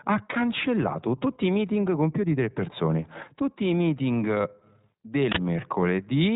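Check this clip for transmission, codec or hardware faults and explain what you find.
Two faults are audible in the speech: codec coloration running through the whole recording, and one brief burst of digital noise near the end.

The iLBC codec damage is plainly audible from start to finish. The speech sounds narrow and muffled, with nothing above about 3.8 kHz, and carries a rough, slightly synthetic grain. iLBC is a narrowband VoIP codec that codes each short frame's excitation on its own, without relying on the previous frame. The character fits 20 ms frames at around 15.2 kbps. The speech stays intelligible but its texture is coarse.

The uninitialised buffer is heard from 5.32 to 5.36 s as a sudden blast of harsh digital noise lasting about 46 ms. A playback buffer was sent out before any audio had been written into it, so whatever leftover memory it held was played as if it were sound. 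The burst's length fits a 2048-sample block being read out whole.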